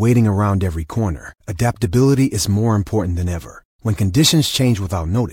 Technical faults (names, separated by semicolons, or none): none